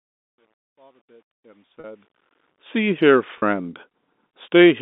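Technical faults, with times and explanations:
1.80–1.84 s and 3.38–3.42 s, packet loss with pitch repetition: each gap lasts about 40 ms, consistent with two consecutive 20 ms packets. The receiver fills it by looping the last pitch period, so the sound briefly holds with a slightly buzzy, static quality before normal audio resumes over the band-limited telephone line.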